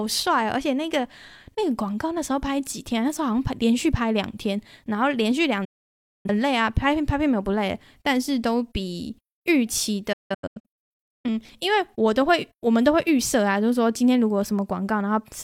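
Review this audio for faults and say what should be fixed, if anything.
Digital broadcast dropout mutes the speech from 5.65 to 6.29 s and in scattered holes of up to 0.17 s between 10.13 and 11.28 s. The receiver silenced failed frames with 8 ms fades, leaving flat waveform gaps and blank spectrogram columns. Better reception or error protection would prevent it.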